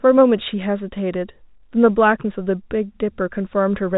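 Nothing stood out on listening to this speech, which has the narrow telephone-band sound of G.711 coding.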